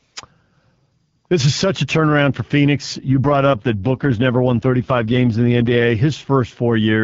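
Just after "such a turnaround for", from 2.93 to 5.92 s, an AMR rate drop makes the speech rough and synthetic, consistent with the codec stepping down from 12.65 to 6.6 kbit/s. On a spectrogram the bandwidth holds with no gap, but harmonics turn smeared and grainy.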